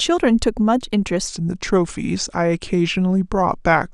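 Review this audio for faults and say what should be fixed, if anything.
Section at the wrong speed, from 1.27 s to the end of the clip: at that point the speech abruptly slows and drops in pitch together, playing back at about 0.87 times its recorded rate, which lowers it by roughly two semitones and stretches each syllable. Because speed and pitch move as one, the likely cause is a resampling or clock mismatch, with this section played at a different rate from the one it was recorded at. To prevent it, confirm that every segment's sample rate matches the project or playback rate before joining or exporting.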